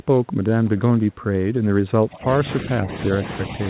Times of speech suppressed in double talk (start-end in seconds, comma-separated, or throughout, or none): 2.01-2.89